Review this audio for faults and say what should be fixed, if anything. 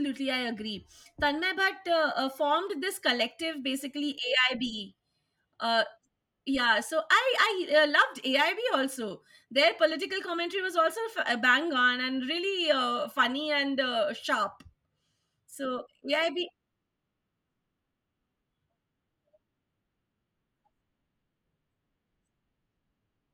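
Nothing needs fixing: no faults are audible anywhere in the speech.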